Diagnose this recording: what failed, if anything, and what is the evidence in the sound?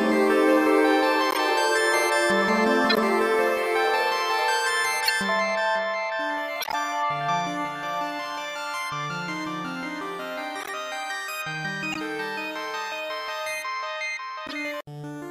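Corrupt frame decoded at 1.31, 2.90, 5.04, 6.60, 10.60, 11.92 and 14.47 s. At the codec stage, bit-damaged frames were decoded anyway, producing brief misplaced-frequency chirps, squeaks, blips or noise bursts lasting a few frames.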